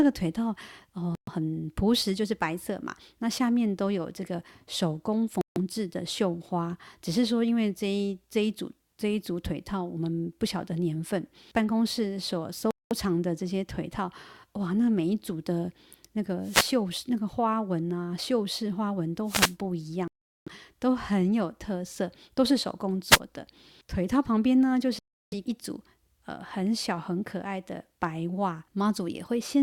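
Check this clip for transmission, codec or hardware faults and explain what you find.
The speech has two kinds of fault: five short dropouts to silence and three bursts of static.

Bluetooth stall, at 1.15–1.29 s, 5.41–5.57 s, 12.71–12.93 s, 20.08–20.48 s and 24.99–25.34 s. These are likely Bluetooth stalls, where radio interference delays packets, the headphones' buffer empties, and playback halts until the resent data arrives. Each is a clean gap of silence lasting 0.12 s, 0.15 s, 0.20 s, 0.39 s and 0.33 s, after which the speech resumes.

Wireless microphone noise hit, at 16.42–16.76 s, 19.25–19.56 s and 23.08–23.19 s. The analogue FM microphone's signal fades when reflected paths cancel at the receiver, so receiver noise rises and briefly covers the voice. Each is a quick swish of static, about a third of a second for the first two and about 0.1 s for the last.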